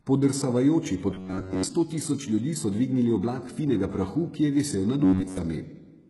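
A speech clip whose treble sounds gritty and metallic throughout, with nothing above 11.5 kHz, the heavy smearing of HE-AAC compression, likely at a low bitrate around 12 kbps, where the upper bands are rebuilt from copied lower ones and their harmonics fail to line up. From 1.10 to 1.64 s, and again from 5.04 to 5.37 s, the speech turns into a rigid buzz at 93.8 Hz. This is robotic sound from repeated short buffers, likely caused by the software looping roughly 10.7 ms of audio when new data arrived too late. In the first stretch most of the audio is replaced by repeats, and in the second all of it is.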